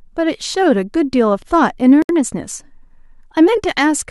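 At 2.02 s the speech stops dead for about 69 ms, until 2.09 s. This is a gap at a join of encoded pieces. Two separately encoded segments were spliced without trimming encoder delay and padding. The edges are smeared. Speech then resumes where it stopped.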